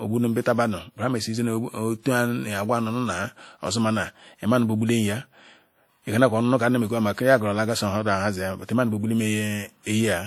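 Speech, carrying WMA compression artefacts from start to finish: the speech rings and smears, and a washy hiss swells and fades with the talker's level. Long transform blocks spreading quantisation noise over tens of milliseconds are the likely cause, with damage that fits a bitrate around 48 kbps. A spectrogram would show energy stopping near 20.1 kHz, plus speckled, patchy gaps where weak components were zeroed and a noise haze clinging around each syllable.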